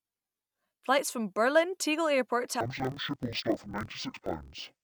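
Speech clip in which, from 2.61 s to the end, interleaved audio is read as planar: each 24 ms block's alternating samples are split into halves and played at half speed, dropping the sound an octave, doubled and choppy at 41.7 Hz. A spectrogram shows halved harmonic spacing with vertical seams every 24 ms.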